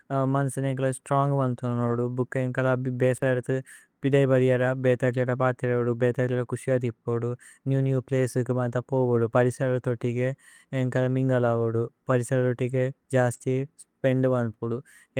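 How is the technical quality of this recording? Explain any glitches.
The recording has two kinds of network glitch, one near the start and a cluster near 13.4 s.

Lost packet rebuilt from error correction at 1.87 to 1.97 s, 13.33 to 13.35 s and 13.42 to 13.44 s. Lost audio, about 60 ms and then 20 ms, was replaced by a low-bitrate copy carried in the following packet, so nothing goes silent. Those stretches sound rougher and noisier instead of smeared. The first one fits three separate packets.

Short concealed packet loss at 13.37 to 13.42 s. About 20 ms never arrived and had no backup copy. The decoder extended the preceding sound for about 23 ms and then blended back into the real audio. Rather than the coarse but intact quality of the rebuilt stretches, this gives a brief smear or wobble in which the real sound is missing.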